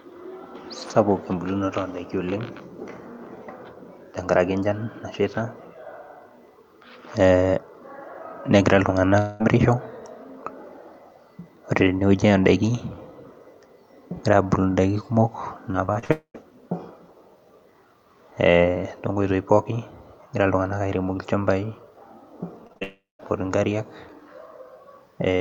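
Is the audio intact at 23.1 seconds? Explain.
No. From 22.83 to 23.21 s, a long network dropout, likely from lost packets, leaves a fading buzz, then silence; 360 ms of speech never returns.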